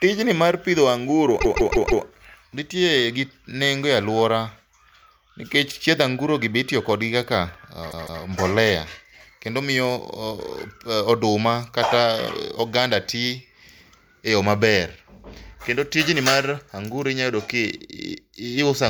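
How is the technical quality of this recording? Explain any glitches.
The speech has two stutters caused by repeated frames.

From 1.40 to 2.03 s, right after "mar pidho anguro" and before "nitie gi nengo e", a 0.16 s slice plays four extra times. Around 7.90 to 8.22 s, after "be itiyo kodgi kaka", the same-length block plays twice more. The block length points to a short run of compressed frames being resent, so the decoder replays them. Each repeat is an exact copy. Unlike a dropout, nothing is lost, and the audio instead grows by about 0.63 s and 0.31 s.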